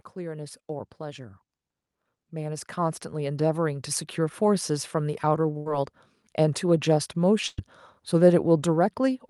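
From 0.14 to 1.46 s, automatic gain rising lifts the level by about 4 dB, then again from 2.16 to 5.28 s by about 9 dB. The gain control judged the input too quiet, so speech and background swell together over those stretches. A burst of packet loss follows at 5.57 to 5.68 s, with about 80 ms of audio missing, and again at 7.48 to 7.59 s, with about 100 ms missing. Each gap is filled by extending the last sound and fading it, heard as a brief held buzz or decaying hiss before speech resumes further on.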